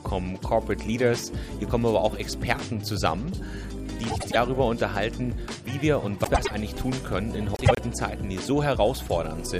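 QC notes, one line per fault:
4.10–4.36 s, 6.24–6.51 s, 7.54–7.79 s: frames out of order. In each stretch, two adjacent blocks of about 105 ms play in swapped order, so the later audio comes before the earlier. The block length fits a run of four frames each. The audio jumps forward, then back, then forward again, which produces a brief garbled flutter. No time is lost overall.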